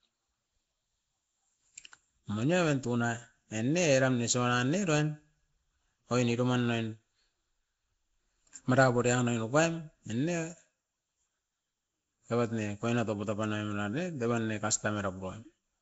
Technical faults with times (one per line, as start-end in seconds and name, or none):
0.00-15.82 Nellymoser compression